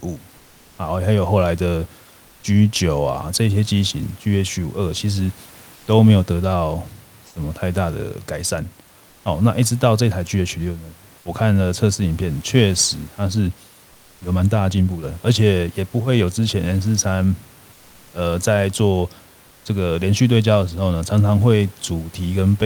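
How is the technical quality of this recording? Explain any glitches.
Four short pauses have comfort noise in place of the background: 0.39–0.75 s, 5.75–5.87 s, 7.27–7.35 s and 9.11–9.23 s. The sender stops transmitting when no speech is detected, and the receiver fills each gap with synthetic noise, likely from Opus DTX. The textured room noise, which sits about 31 dB below the speech, drops out and is replaced by a smooth, featureless hiss about 2 to 4 dB quieter. Unlike a noise gate or dropout, the pause is never truly silent.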